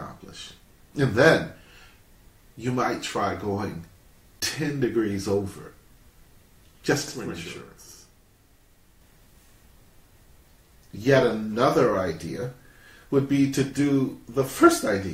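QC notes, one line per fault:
7.08–9.01 s, channel delay (doubling): one channel runs 92.9 ms late, which fits a 4096-sample buffer, so the mono sum holds an equal-level second copy heard as a slap echo. Spectrogram and waveform show every onset doubled, 92.9 ms apart.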